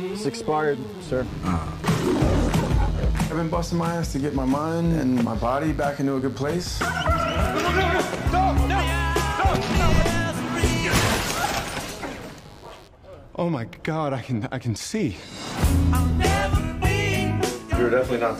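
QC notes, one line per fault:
0.00–12.88 s, mains buzz: a steady, raspy buzz sits roughly 30 dB under the programme, then stops. Sharp switching spikes arriving twice per 50 Hz cycle produce a dense 50 Hz harmonic series extending into the kilohertz range, which gives the buzz its edge.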